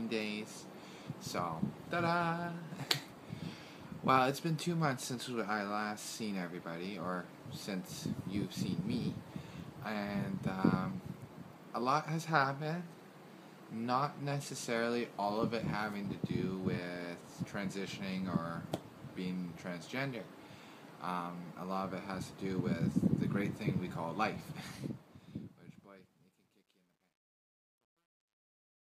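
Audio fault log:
24.53–28.88 s, truncation distortion on a fade: the fade-out that begins around 24.5 s loses smoothness as it falls, because the gain stage keeps only about 12 bits and adds no dither, so the shrinking waveform collapses onto a few coarse steps. From 25.48 s to the end the tail turns gritty. Unlike plain noise or a clean fade, the roughness grows as the level sinks and tracks the signal itself.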